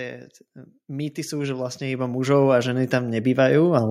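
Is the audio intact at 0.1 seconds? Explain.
Yes, the speech at 0.1 s is intact, with no fault heard at that moment.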